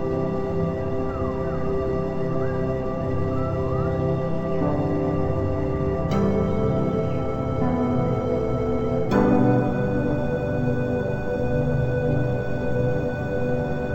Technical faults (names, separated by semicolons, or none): stereo read as mono